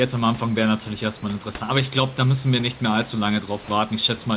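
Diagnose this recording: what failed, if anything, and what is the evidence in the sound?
At the call-processing stage, the sender's voice detector likely took a quiet stretch of speech for background and stopped transmitting, so the receiver filled the gap with comfort noise. This is sound dropped by the voice detector: from 3.64 to 3.68 s, 40 ms of speech gives way to a flat, steady hiss, and 20 ms of speech is lost before the signal resumes. The fill sits within a band ending at 4 kHz, as a G.711 call path produces.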